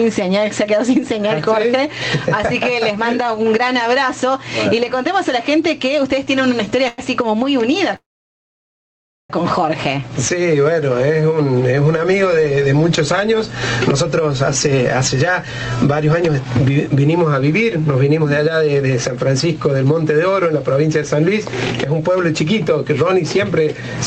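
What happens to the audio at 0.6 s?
Gain pumping runs through the whole clip, including 0.6 s. Excessive gain likely drives a fast limiter, so the gain swings around 10 dB and loud and soft parts are squashed closer in level, showing as a breathing waveform envelope.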